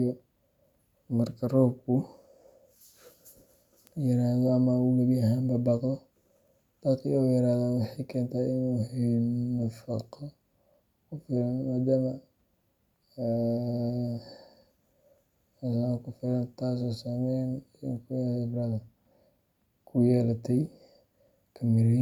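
A single bit flipped in memory or on a digital link, corrupting one sample at a time: at 3.87 s the sample value jumps by a power of two to about -25 dBFS and snaps straight back, and at 8.14 s the same bit error spike recurs at about -37 dBFS. Each is heard as one sharp, broadband tick with no relation to the speech around it, the second noticeably quieter than the first.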